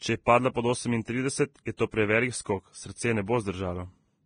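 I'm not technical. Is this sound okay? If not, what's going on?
No. The speech sounds hissy and grainy throughout, with nothing above 9.7 kHz, most likely from heavy Vorbis compression, which discards treble detail to save space.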